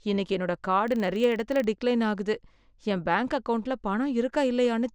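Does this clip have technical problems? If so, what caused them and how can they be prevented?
Yes. A filter restarted on every block runs from 0.88 to 1.71 s, between "இன்னைக்கு என்னோட" and "டிக்லைன் ஆகுது என் பேங்க்". It drops its stored state at each block boundary and starts again from zero, so each block begins with a small transient. These repeat as a 25 Hz buzz that tracks the speech level, which fits blocks of about 40 ms. To prevent it, keep the filter's internal state between blocks instead of resetting it each time.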